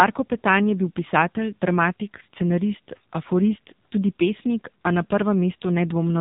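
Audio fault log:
Throughout: AMR narrowband mobile codec. Nothing above about 3.8 kHz survives, and the speech has the buzzy, synthetic edge of a vocal-tract model driven by sparse pulses. The heavy damage points to a low AMR-NB mode near 6.7 kbps.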